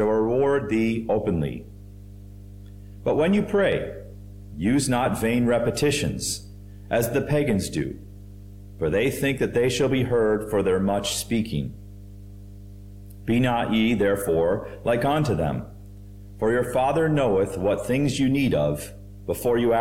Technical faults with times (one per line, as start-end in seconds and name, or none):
0.00-19.80 mains hum